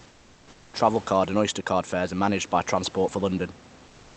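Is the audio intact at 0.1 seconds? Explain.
No. From 0.0 to 0.73 s the room background is replaced by comfort noise: a steady, featureless hiss about 4 dB quieter than the real ambience. This likely comes from discontinuous transmission in the Opus call path, with the receiver synthesising noise during the pause.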